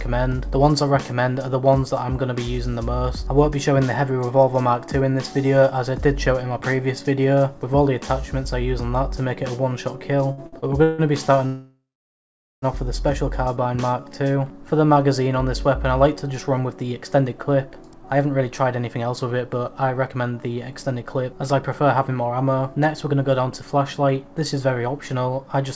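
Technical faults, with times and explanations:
10.28–11.01 s, repeated stalls (stutter): five short gaps, the longest 150 ms, fill about 43% of this stretch. Packets kept arriving late, the jitter buffer ran dry each time, and the receiver stretched the last sound to bridge them, so the audio drags and stutters while little is lost.
11.46–12.65 s, call audio freeze: the sound holds briefly as a fading continuation of the last moment, then drops to silence for about 0.81 s before resuming where it stopped. This is likely packets held up in transit emptying the jitter buffer, inserting a 1.16 s gap.
13.30–14.95 s, jitter buffer slow-down: the audio runs at about 91% speed with unchanged pitch, gaining 156 ms. Rebuilding its reserve, the receiver repeated single pitch periods or slices of pauses many times over, drawing sounds out.
16.39–25.57 s, jitter buffer speed-up: holding more audio than its target, the receiver trimmed short pieces of one or a few pitch periods again and again, removing around 0.7 s in total. 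The audio plays about 8% fast at the same pitch and sounds hurried.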